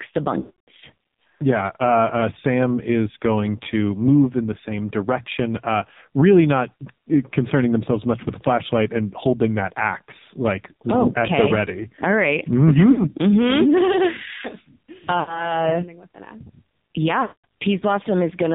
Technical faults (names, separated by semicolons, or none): AMR narrowband mobile codec; lost AMR speech frames